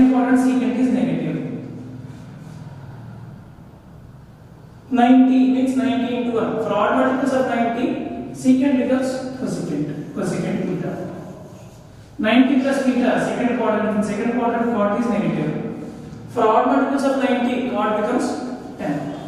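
No technical faults can be heard anywhere in the audio, and the signal stays steady and intact throughout.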